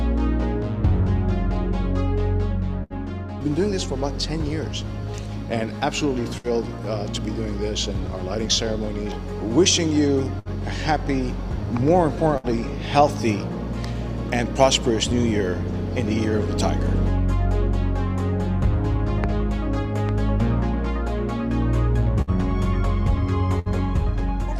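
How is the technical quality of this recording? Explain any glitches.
The recording is marred by two kinds of fault: six short dropouts from bursts of packet loss, and two loud pops near the end.

The bursts of packet loss fall at 2.83, 6.38, 10.39, 12.37, 22.22 and 23.59 s. Each time, roughly 60 ms of audio never arrived, and the receiver covered about the same span by extending the last sound it had and fading it down. Each glitch sounds like a brief held buzz or dying hiss, after which the audio jumps ahead with material missing. Unlike a pop, nothing is added on top here. The sound itself stalls and then skips.

The loud pops come at 19.24 and 20.09 s, each lasting about 20 ms. The first stands well above the surrounding level and the second only a little above it. A sudden voltage step or pulse, likely from a connector, switch, static discharge or driver glitch, was added to the signal. 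Each is heard as a sharp click-thump riding over the sound, which carries on underneath without any gap. That continuity is what separates these pops from the packet-loss dropouts.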